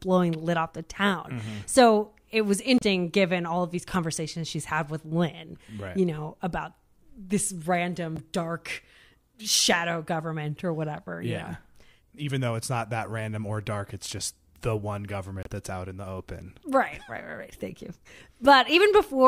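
At 2.78 to 2.82 s, 8.14 to 8.19 s and 15.43 to 15.47 s the speech is broken by short glitches, each 40 to 52 ms long. These come from damaged data in a compressed stream: corrupted bytes make the decoder misread frames and lose sync until it finds a valid header. On a spectrogram each shows as a narrow vertical break. The waveform shows an abrupt discontinuity there.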